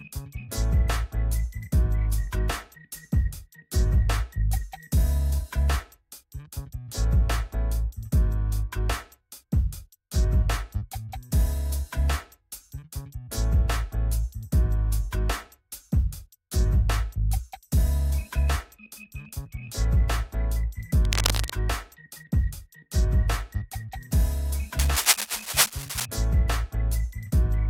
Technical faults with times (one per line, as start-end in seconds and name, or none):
21.05-21.51 cable scratch noise
24.79-26.06 cable scratch noise